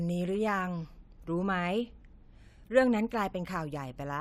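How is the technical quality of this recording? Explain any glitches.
No glitches to report: the recording sounds steady and intact, with nothing that needs explaining.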